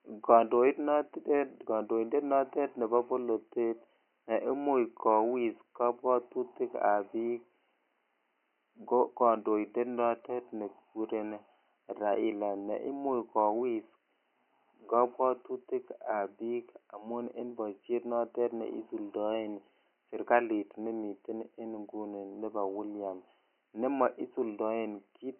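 No technical faults can be heard anywhere in the speech, and the only background is faint room noise about 53 dB below the speech, which belongs to the recording itself.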